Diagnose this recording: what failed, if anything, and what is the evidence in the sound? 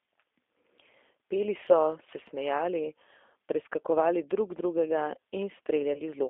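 The whole call went through a G.729 codec at 8 kbit/s, so this is a codec-stage problem. The speech sits in a narrow telephone band of roughly 300 Hz to 3.6 kHz, with plainly audible roughness because it's rebuilt from a vocal tract filter and a sparse pulse excitation.

There's also VoIP packet loss concealed by the speech codec at the network stage, from 5.94 to 6.01 s. About 20 ms went missing, which points to a single dropped packet. The decoder stretched the last pitch and filter into a fading buzzy tone or coloured noise, and the voice stays weak briefly after.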